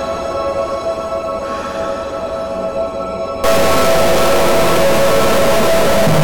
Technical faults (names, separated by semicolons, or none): stuck bit